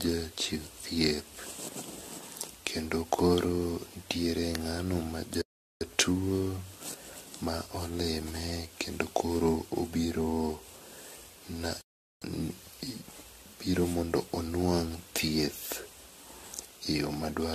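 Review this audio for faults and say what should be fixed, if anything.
Generation loss runs throughout the speech: the sound is swirly, smeared and hollow, with blurred attacks and nothing above 14 kHz. This is likely from several lossy passes, around five, fitting repeated AAC encoding near 64 kbit/s, each requantising on a shifted frame grid. Keep one lossless master and encode only once.

Playback stalls occur at 5.42–5.81 s (0.39 s) and 11.81–12.22 s (0.40 s): the audio drops to silence mid-flow, then resumes. The likely cause is the player's buffer running dry or its audio thread being blocked. Use a larger playback buffer and keep the audio thread unblocked.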